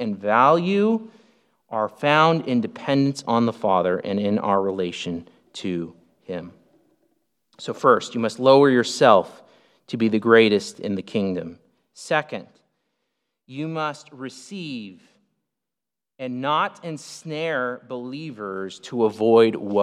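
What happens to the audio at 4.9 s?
Nothing goes wrong at 4.9 s: the speech continues intact, with no dropout, click, distortion or abrupt jump in level.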